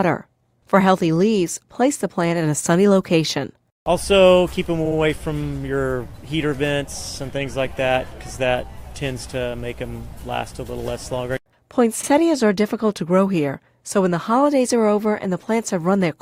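At 12.03 to 12.10 s, repeated frames: a 60 ms run of compressed data, which fits three frames, was decoded twice, producing a brief stutter that lengthens the audio by 60 ms.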